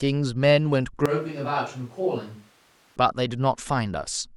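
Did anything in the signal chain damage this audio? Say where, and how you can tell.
Yes. From 1.06 s to 2.96 s the speech abruptly turns roomy and hollow, loses bass, and drops by about 10 dB. Background noise rises to roughly 30 dB below the speech. Both transitions are instant, with no fade. This points to the capture stage: a switch to a distant microphone, likely because the close mic's feed dropped out and a farther source, such as a camera mic, filled in. Distance adds reflections and room noise while reducing direct sound and low-frequency proximity energy.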